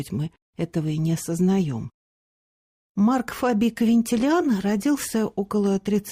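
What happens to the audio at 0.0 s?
At 0.0 s the audio is intact, with no fault to be heard at that moment.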